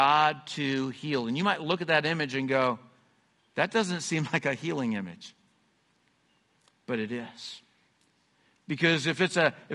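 Low-delay AAC compression runs throughout: the speech sounds rough and grainy, with noise between harmonics, likely from short-frame AAC-ELD coding at a bitrate near 32 kbps.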